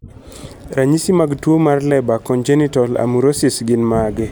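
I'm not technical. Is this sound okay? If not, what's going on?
Yes, nothing in this recording points to a technical problem with how the signal was captured or carried.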